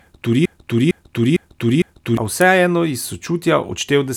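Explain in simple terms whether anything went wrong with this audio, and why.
Broken-record loop from 0.46 to 2.17 s: a piece of speech about 0.45 s long repeats four times in a row, likely because playback stalled and resent its last fragment, so that stretch of speech is lost. Electrical switching spike at 2.41 s: a sharp snap sits on top of the speech, likely a nearby switch or static discharge picked up by the audio line.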